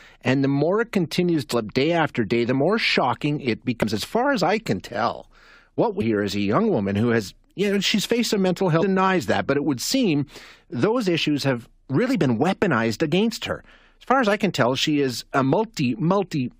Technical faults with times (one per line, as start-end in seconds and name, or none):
1.52 damaged data in a compressed stream
3.82 damaged data in a compressed stream
6.00 damaged data in a compressed stream
8.81 damaged data in a compressed stream
15.43 damaged data in a compressed stream